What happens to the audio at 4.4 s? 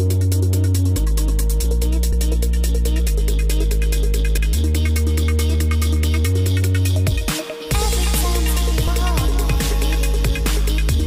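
At 4.38 s the sound jumps abruptly forward, as if about a third of a second has been cut out, with no gap of silence at the join. This is audio missing between chunks, likely from the recorder dropping material while switching between its 2.5 s chunks.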